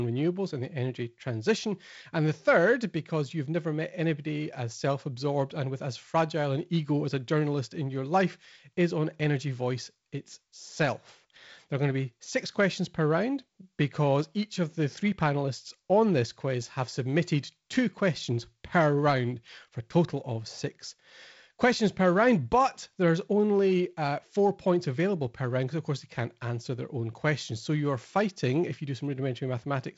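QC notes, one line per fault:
No faults heard in this speech recording.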